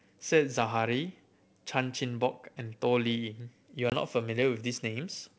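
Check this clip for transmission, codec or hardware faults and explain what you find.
One transmission fault is audible: packet loss on an ADPCM call, from 3.90 to 3.95 s. Roughly one packet, about 20 ms of audio, went missing and was replaced by silence. The receiving decoder's adaptive predictor and step size then no longer matched the sender's. The result is a hard-edged hole in the speech, and the audio resumes slightly distorted for some tens of milliseconds until the decoder recovers. The G.722 wideband coding at 64 kbit/s around it shows at most faint codec damage.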